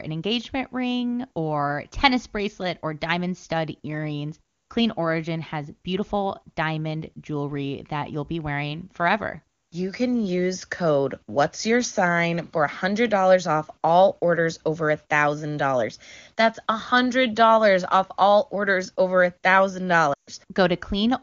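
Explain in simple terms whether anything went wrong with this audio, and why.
At 20.13 to 20.30 s, there are lost AMR speech frames. The phone briefly repeats the last sound, then quickly drops to near silence for about 0.14 s.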